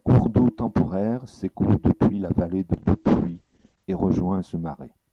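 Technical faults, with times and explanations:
2.75–3.91 s, call bitrate drop: after "depuis la vallée de", the speech turns rough and muffled, which fits the encoder being pushed from 32 to 9 kbps by a falling bandwidth estimate. For about 1.1 s, coding is coarser and the top band shrinks from 20 kHz to 8 kHz.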